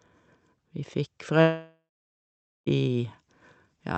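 From 1.41 to 2.68 s a long network dropout, likely lost packets, leaves a fading buzz, then 0.82 s of flat waveform and blank spectrogram.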